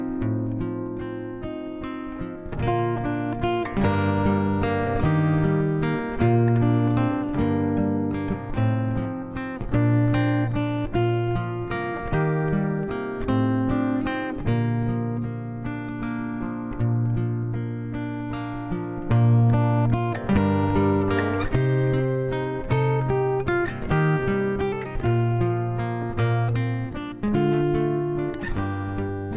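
No technical faults are audible.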